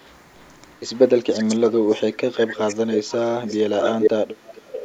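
Echo leak in this speech recording appears at 0.05, 1.31, 2.90, 3.12, 3.49, 3.8 to 4.1 and 4.44 s to the end: a delayed copy of the talker returns roughly 0.42 to 0.45 s later, ranging from barely audible to louder than the speech itself, likely because a far-end loudspeaker's echo canceller let residue through. Speech suppressed in double talk runs from 1.36 to 3.72 s, where the voice dips by as much as about 25 dB for roughly two seconds in total while the far side was playing on the loudspeaker, likely as the canceller turns down both signals together.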